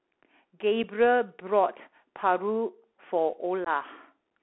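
Throughout, the speech sounds muffled and boxed-in, with scratchy sibilants, a granular hiss underneath and roughness on loud moments. That is the Bluetooth CVSD headset codec: its one-bit, 64 kbps up/down coding keeps only about 300 Hz to 3.4 kHz, and its adaptive step falls behind fast, loud sounds.

At 0.83 s a tiny hole with abrupt edges breaks the speech, and from 3.65 to 3.68 s a longer dropout of about 15 ms does the same. This is unconcealed Bluetooth headset packet loss. The first gap, about 7.5 ms, fits a single lost voice packet and the second roughly two. Nothing was filled in, so the edges are abrupt.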